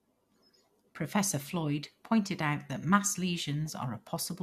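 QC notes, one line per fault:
No faults detected.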